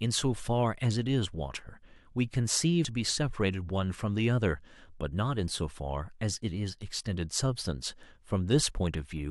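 A stream segment skip occurs at 2.84 s in this speech: the audio jumps abruptly forward with a brief blip, so the speech does not continue smoothly from what came before. The likely cause is a segment of the stream that failed to load, with the player moving straight on to the next one. A stretch of the recording would then be absent, and the join between the two segments produces the blip.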